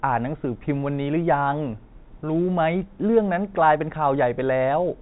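No faults are audible in this telephone-band speech.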